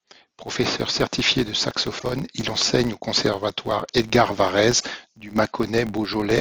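Throughout the speech runs a filter restarted on every block: the filter discards its memory at each block boundary and starts again from silence, so every block opens with a small transient. The result is a steady buzz at about 93.8 Hz, which fits a 512-sample block, rising and falling with the speech level. On a waveform, small regular spikes mark each boundary; a spectrogram shows thin vertical lines and harmonic stripes spaced 93.8 Hz apart.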